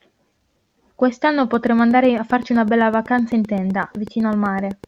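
Interference from nearby equipment or a faulty connection is the likely source of a train of clicks from 1.54 s to 4.85 s. Some thirty evenly spaced pulses arrive about 7.9 times a second, ticking over the speech and through its pauses, roughly as loud as the speech itself.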